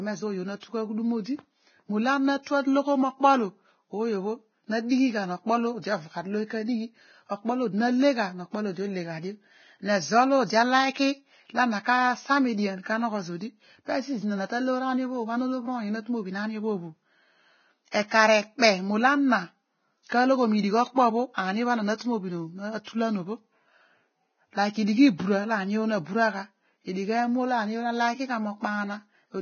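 From the start, the whole speech track has a dull, grainy quality. Nothing comes through above about 6.6 kHz, and the treble that remains is hissy and rough, with consonants smeared instead of crisp. That's the heavy damage you'd expect from a low-bitrate transform codec, likely Vorbis at something near 17 kbps, where the fine upper detail gets quantised so coarsely that it turns into noise of similar loudness.

There are two spots of pre-echo. The first runs from 17.91 to 17.94 s, about 32 ms, and the second from 20.08 to 20.12 s, about 43 ms. Each time, a short hiss creeps in just ahead of a sharp onset, and the attack itself lands soft and blurred. What's going on is that the codec spreads its quantisation noise across the whole block. When a loud transient sits late in that block, the noise sized for it leaks into the quiet stretch right before it.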